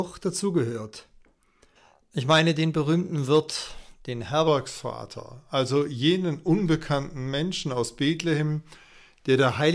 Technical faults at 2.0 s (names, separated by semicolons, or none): none